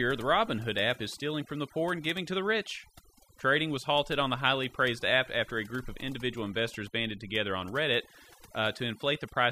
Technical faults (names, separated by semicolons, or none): overdone noise removal